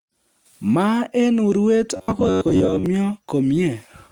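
Robotic sound from repeated short buffers runs from 1.96 to 2.86 s, where the speech becomes a rigid, metallic buzz pitched near 93.8 Hz. The likely cause is audio arriving too seldom, with about half replaced by repeats of a roughly 10.7 ms buffer.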